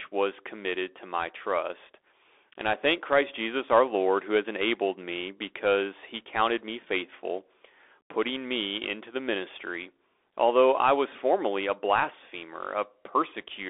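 Throughout the speech, the sound is thin and boxed in, with nothing above about 3.6 kHz or below 300 Hz, s sounds scratchy, and a grainy hiss underneath. This is the Bluetooth CVSD headset codec, which fits a 64 kbps one-bit link whose adaptive step can't keep up with sharp, loud high detail.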